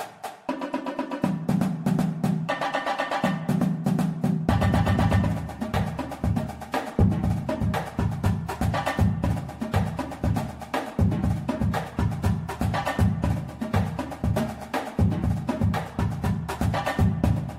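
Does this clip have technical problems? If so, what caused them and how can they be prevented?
No, the signal holds steady throughout, with no dropouts, distortion or other technical faults audible, so there is nothing here that needs preventing.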